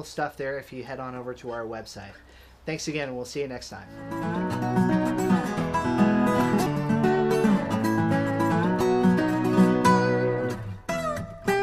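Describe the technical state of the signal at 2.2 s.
At 2.2 s the signal is intact, with no technical fault present at that moment.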